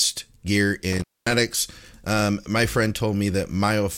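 Between 0.93 s and about 1.33 s the speech drops out abruptly, with crackle marking both the break and the return and faint hiss filling the gap, which lasts roughly 0.23 s. This is an intermittent contact: a loose plug or cable momentarily lost its connection, so the audio path opened, and the rough, unsteady metal contact as it parted and re-seated produced the crackle at the edges.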